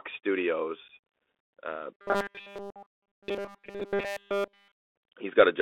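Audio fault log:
throughout: Bluetooth CVSD headset codec. The speech sits in a narrow 300 Hz to 3.6 kHz band, with scratchy s sounds, a granular hiss and slope-overload distortion on loud bright moments, which fits a 64 kbps CVSD link. A plain low-pass filter would lose the top without the grain.
0.88–0.91 s: unconcealed Bluetooth headset packet loss. About 11 ms of speech drops out abruptly, pointing to a few lost headset packets, with hard edges and a briefly quieter return. Unlike codec grain, it is a discrete hole, not a constant texture.
1.94–4.72 s: robotic sound from repeated short buffers. Essentially all the audio becomes a rigid metallic buzz at a fixed 200 Hz, matching a 5 ms segment looped over and over, likely because new buffers arrived too late. Packet loss leaves gaps, whereas this imposes a steady pitch.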